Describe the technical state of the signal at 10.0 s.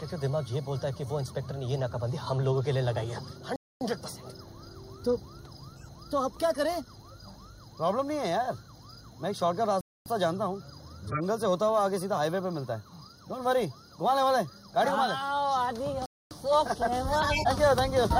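At 10.0 s the signal sits inside a gap between chunks, a hole of silence from 9.81 to 10.06 s (250 ms). It fits audio delivered in 6-second chunks with a late-starting join. It sounds like an abrupt dropout. On a waveform it shows as a flat, hard-edged block, and on a spectrogram as a clean vertical blank band.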